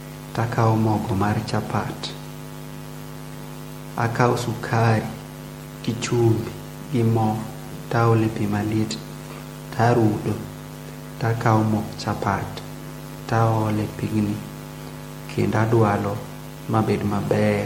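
Throughout the speech, generation loss gives the audio a swirling, hollow smear, with consonant attacks blurred and nothing above 16.5 kHz. What separates it from a single low-bitrate encode is that the damage runs deeper than a rate near 60 kbit/s would explain. The likely cause is repeated MP3 decoding and re-encoding, perhaps half a dozen passes or more, each quantising on a shifted frame grid so the noise and spectral holes stack up.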